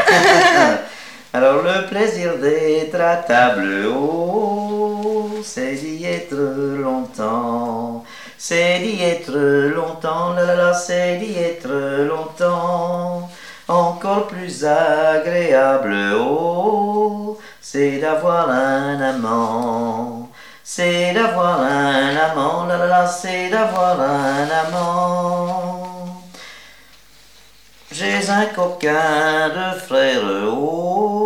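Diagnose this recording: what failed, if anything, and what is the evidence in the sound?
At 23.76 s a single sharp snap sits on top of the sound, peaking around -15 dBFS. On the waveform it is a lone narrow spike, and on a spectrogram a thin vertical line across all frequencies. This is an electrical switching spike, likely arc interference induced into the analogue wiring.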